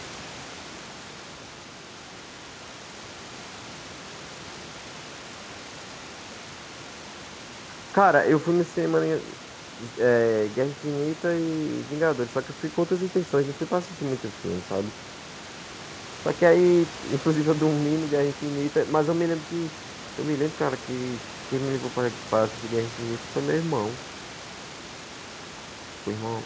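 No technical faults are audible in this speech: the room's background noise sits about 19 dB below the speech, and nothing is heard above 8 kHz, which fits a wideband call codec such as G.722 working normally.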